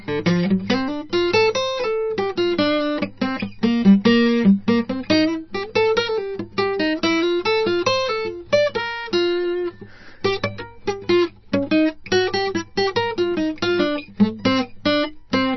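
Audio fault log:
Throughout, MP3 compression, heavy and likely at a very low bitrate around 26 kbps: the music has nothing above 5.9 kHz, so it sounds dull and boxed-in, and the encoder, starved of bits, keeps dropping quiet detail that flickers in and out, giving a watery, swirly texture with smeared attacks.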